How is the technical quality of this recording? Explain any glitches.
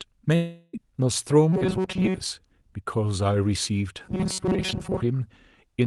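The recording has clear network faults: one early dropout and two stretches of robotic buzzing. It has the sound of a call codec, with audio reaching up to about 12 kHz.

From 0.35 to 0.75 s there is a long network dropout. The sound does not simply stop. The last bit of audio is stretched into a fading buzz that fills the whole gap, with no true silence. When the sound returns, about 0.38 s of speech is gone. The likely cause is packets that never arrived, so the receiver had to invent filler.

From 1.53 to 2.20 s, and again from 4.05 to 5.03 s, the speech turns robotic. It becomes a rigid, metallic buzz pitched at 188 Hz. It still loosely follows the speech. Most of the real audio in these stretches is skipped. The likely cause is robotic sound from repeated short buffers. Audio arrives too rarely, so the player loops a tiny slice of about 5 ms. That loop rate sets the fixed pitch.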